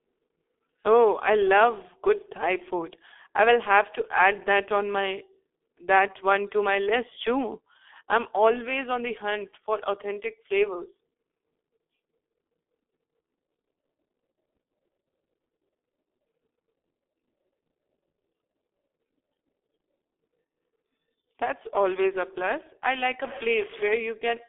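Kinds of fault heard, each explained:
G.723.1 codec: a 6.3 kbit/s telephony codec with coarse 30 ms frames strips everything above 3.6 kHz, leaving the speech heavily muffled and hoarse, with smeared consonants.
Stuck bit: a data bit likely held at a fixed value corrupts samples from 23.24 to 23.95 s, right after "a plus I like", throwing about half the sample values off.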